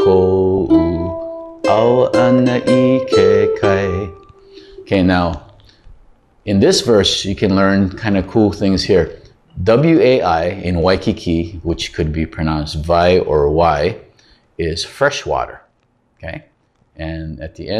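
DAB burbling appears from 0.55 to 0.58 s, a brief burst of burbling over the sound. Weak reception let bit errors through the error correction into the MP2 audio data, even at a low error rate of around a tenth of a percent. Corrupted samples put short blips of noise into individual sub-bands. The 30 ms span fits a few damaged frames in a row.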